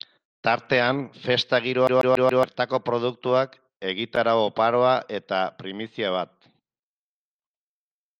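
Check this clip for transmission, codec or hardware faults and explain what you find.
One fault is present in the speech. From 1.87 to 2.43 s, just before "produktuak egitarau oparoa eta", the CD is stuck on one turn: the laser jumps back one track each revolution, so a 140 ms slice repeats four times with brief mutes between, giving a fast, even stutter.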